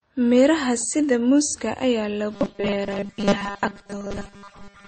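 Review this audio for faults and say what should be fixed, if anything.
Throughout the speech, smeared, watery artefacts stack on top of one another and nothing is heard above 8.4 kHz. This is likely transcoding between lossy codecs: the sound points to a low-rate MP3 re-encoded to WMA, with each stage adding its own damage. On a spectrogram, a hard ceiling sits at 8.4 kHz with blotchy, gappy detail below it. Encode once from the original source at an adequate bitrate.

From 2.33 s to the end, the speech turns into a rigid metallic buzz at 200 Hz, likely robotic sound from repeated short buffers. Each roughly 5 ms chunk is replayed, and most of the real audio is skipped. A spectrogram shows even harmonic stripes every 200 Hz, and the waveform shows identical repeating cycles. Enlarge the jitter buffer or fix the delivery stall so that fresh audio arrives on time.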